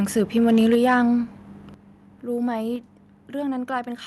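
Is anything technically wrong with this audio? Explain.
Yes. Two related faults are audible. From 0.18 to 0.94 s there is microphone overload: the input gain was likely set too high, so peaks exceeded the converter's limit by about 4 dB. A few percent of samples are flattened, which gives the loudest syllables a harsh, crackling edge.

The microphone volume is also stepped down three times. The call software likely cut the input gain in single jumps: by about 3 dB at 0.75 s, about 7 dB at 1.74 s, and about 3 dB at 2.76 s. At each step the voice and background drop abruptly together. All of this reaches the listener through an Opus call path whose top end stops near 12 kHz.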